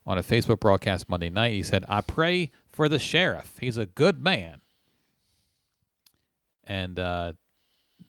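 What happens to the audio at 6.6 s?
A short stall from a late packet runs from 6.53 to 6.62 s. A packet of speech arrived late, the jitter buffer ran dry, and the receiver stretched the last sound for about 60 ms to cover the gap. When the packet came in, playback resumed where it had stopped. Nothing is lost, but that sound is held unnaturally long with a faint buzzy or dipping quality, and everything after it runs about 60 ms later.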